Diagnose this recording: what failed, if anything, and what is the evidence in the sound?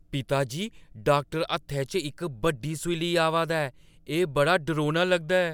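Nothing in this speech recording points to a failure at any stage between capture and playback. None of the sound carries a defect that could be traced to a stage or a mechanism.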